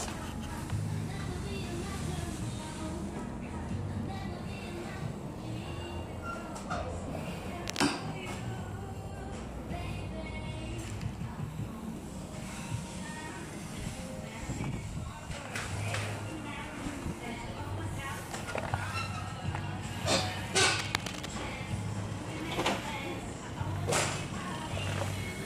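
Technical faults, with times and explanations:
7.67 to 7.86 s: cable scratch noise. A short burst of dense, uneven crackle sits over the sound, roughly as loud as the sound itself. The likely cause is a worn cable or connector being moved, so its contact resistance jumps about rapidly.
20.63 to 21.26 s: cable scratch noise. A longer rustling scrape runs for about 0.6 s, a little quieter than the sound. It is likely a worn contact being moved.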